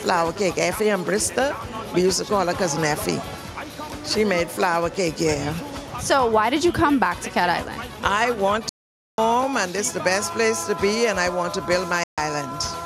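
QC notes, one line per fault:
8.69–9.18 s and 12.04–12.18 s, Bluetooth dropout: the audio drops to silence for 0.49 s, then 0.14 s, and picks up further along as if it had kept playing. Likely cause is packets reaching the headphones too late and being discarded until good ones arrive.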